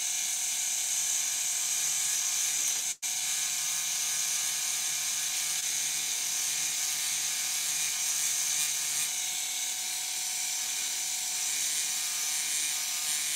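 At 2.91 s, a burst of packet loss begins and lasts until 3.04 s. About 100 ms of audio never arrived in time. The receiver stretched the last sound across roughly 107 ms, fading it down. It becomes a held buzz or fading hiss. Then the sound jumps ahead.

At 5.60 s comes a short concealed packet loss, ending by 5.64 s. About 20 ms went missing. The receiver patched around 16 ms by continuing the previous sound, then blended back. It is heard as a brief smear or wobble.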